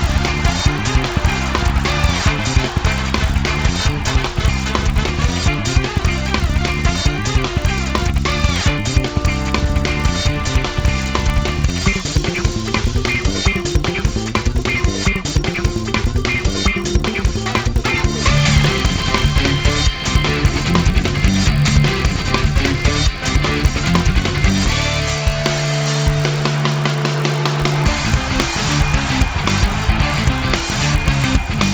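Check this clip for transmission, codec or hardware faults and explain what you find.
One fault runs through the whole clip: the resampler restarted on every block.

Throughout, the audio was converted from 16 kHz to 48 kHz in 20 ms blocks, each processed on its own. At every block edge the converter lacked the true neighbouring samples, leaving a small error every 20 ms. That repeats at 50 Hz and is heard as a buzz that sits under the sound and stops in silence. On a waveform, small discontinuities line up at 20 ms spacing; a spectrogram shows faint vertical lines every 20 ms and a comb of 50 Hz harmonics wherever signal is present.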